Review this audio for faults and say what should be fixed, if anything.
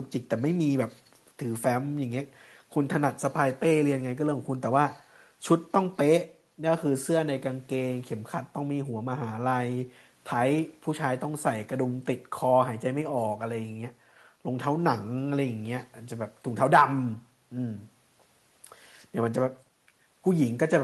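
Nothing needs fixing, as no faults can be heard in this speech. It has come through a WebRTC call path working as intended, with the high end stopping at about 12 kHz, which fits Opus coding at around 32 kbps.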